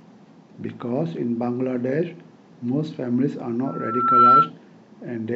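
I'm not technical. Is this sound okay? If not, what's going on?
No. From 3.66 to 4.50 s there's loudspeaker feedback squeal: the mic picks up its own speaker and a 1.4 kHz whistle swells up over about half a second, ending up much louder than the speech.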